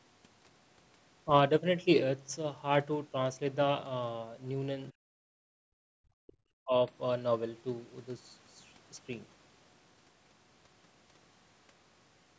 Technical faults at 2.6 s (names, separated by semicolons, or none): none